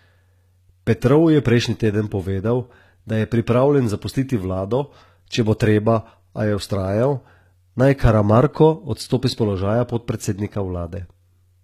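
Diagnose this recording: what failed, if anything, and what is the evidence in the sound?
Throughout the speech, s sounds turn gritty and metallic, and the treble is synthetic, ending near 14.9 kHz. The cause is likely HE-AAC compression at the codec stage, fitting about 20 kbps: copied lower bands rebuild the treble, misaligning its harmonics.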